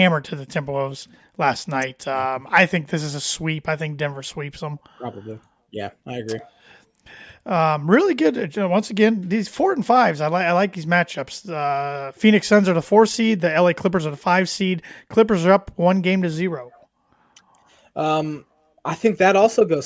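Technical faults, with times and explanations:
No technical faults detected.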